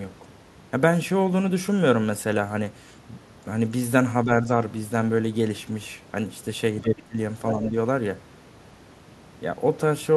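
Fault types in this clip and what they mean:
Speech suppressed in double talk: The speech dips slightly from 4.24 to 4.48 s and deeply from 6.81 to 7.17 s, likely an echo canceller ducking overlapping talk.
Other side's voice leaking through: A faint second voice slips in from 4.45 to 4.51 s and louder from 7.48 to 7.68 s, likely residual loudspeaker echo.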